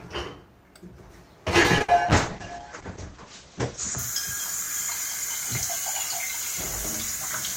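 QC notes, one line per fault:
1.61–1.66 s, short stall from a late packet: a packet arrived late and the jitter buffer ran dry, so the last sound was held for about 30 ms before playback resumed where it left off. Nothing is lost, but everything after runs 30 ms later. The waveform shows a short repeated, periodic stretch, and the spectrogram shows smeared horizontal bands.
1.78–1.82 s, short concealed packet loss: about 20 ms never reached the decoder and was replaced by an extrapolation of the preceding sound, then blended back in. It is heard as a brief smear or wobble. On the spectrogram, a thin column loses fine detail, and the waveform shows slightly softened cycles.
1.82–1.90 s, burst of packet loss: immediately afterwards, about 60 ms more went missing. The concealment kept extending the last sound and faded it out, so the audio becomes a dying buzz or hiss, then jumps ahead. The waveform shows decaying repetitive cycles, and the spectrogram shows blurred, fading harmonics ending in an abrupt resumption.
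2.05–4.04 s, call bitrate drop: the bandwidth estimate fell, and the encoder dropped from 64 to 9 kbps, staying at the bottom for about 1.9 s. At that rate, Opus also narrowed the audio band from about 20 kHz to 8 kHz, so the sound turns muffled and watery. The spectrogram shows everything above 8 kHz cut off sharply, with blotchy, coarse texture below until recovery.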